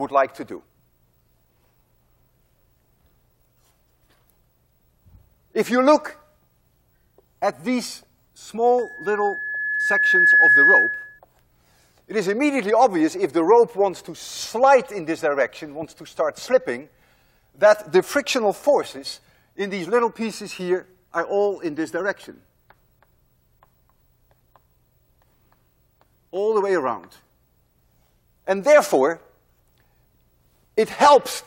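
From 8.78 to 11.19 s the microphone-loudspeaker loop exceeds unity gain at 1.7 kHz, a loudspeaker feedback squeal swelling until it rises above the sound.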